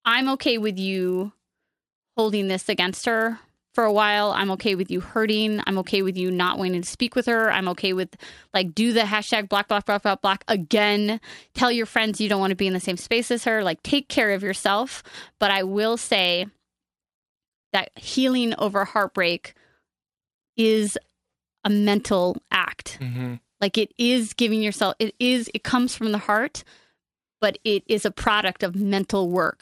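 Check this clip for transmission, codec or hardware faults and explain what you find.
One fault runs through the whole recording. The resampler is restarted on every block. Each 10 ms block is converted from 24 kHz to 48 kHz separately, so every edge carries an error. Under the speech this gives a 100 Hz buzz.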